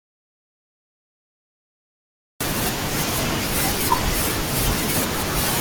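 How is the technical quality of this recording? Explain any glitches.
The recording opens with a dead gap: from the very start until 2.41 s there is nothing at all, not even room tone, before the speech arrives mid-flow. That is an audio dropout to silence, already under way when the clip begins. The likely cause is that the input was lost, through a disconnected device, a failed link or a mute, while the recorder kept writing silence. Whatever was spoken during those first 2.4 seconds is gone.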